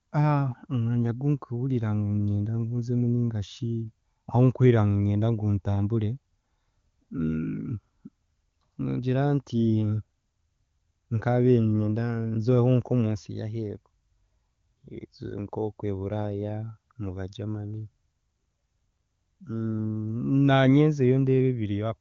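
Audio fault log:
No faults are audible in this speech clip. It carries the band limit of the AMR wideband (HD Voice) codec, with nothing above about 7.1 kHz, and any coding damage is faint at most, which points to one of the higher AMR-WB rates, around 23.85 kbit/s.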